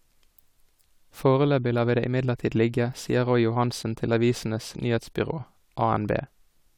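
Nothing in the speech stood out as a technical problem on listening.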